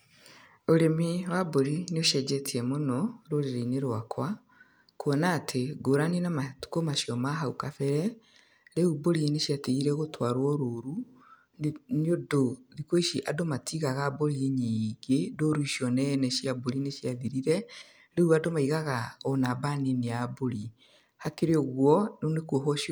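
No audible technical faults.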